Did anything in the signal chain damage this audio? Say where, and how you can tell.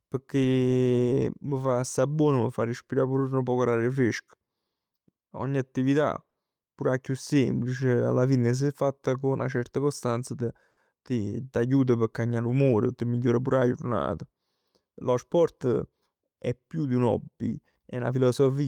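Yes. Throughout the speech there is a faint, uneven unsteadiness in pacing, small hiccups that never settle into a regular rhythm. That points to clock drift between sender and receiver at the network stage: the sending device's clock runs slow, by about five percent, relative to the receiver's. The jitter buffer keeps draining, so the receiver has to keep patching the timeline rather than play a continuous stream.

The repeated timing corrections run from 0.18 s to 18.57 s. The delivery sounds slightly drawn out, at about 96% of natural speed, with tiny stutters where short stretches are repeated. Because the sender is slow, every edit goes the same way, adding material rather than removing it, roughly 0.7 seconds in total across the stretch. The spacing is irregular, which is why it reads as a wobbly tempo, not a steady slowdown.

Two brief holds occur at 6.30 to 6.37 s and 10.71 to 10.79 s, where a sound lingers unnaturally with a slight buzz or dip before carrying on. 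Each is a short stall from a late packet: the buffer ran dry, so the receiver stretched the last sound for 50 ms and then 60 ms until data arrived. Nothing is lost, but playback delay grows by that amount each time.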